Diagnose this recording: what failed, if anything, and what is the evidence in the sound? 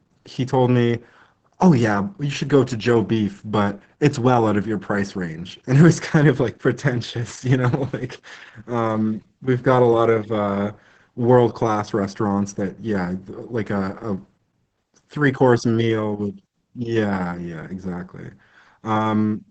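The codec stage failed, with Opus voice compression heavy throughout the clip. The speech is muffled, hoarse and slightly robotic, which fits a low bitrate around 10 kbps in SILK mode. A spectrogram shows a hard ceiling near 8 kHz, with blurred, coarsely coded harmonics beneath it.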